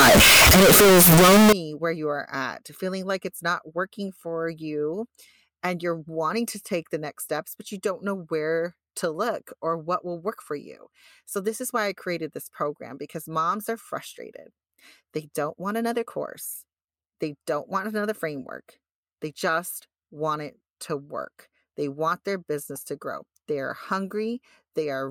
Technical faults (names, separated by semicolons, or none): float read as integer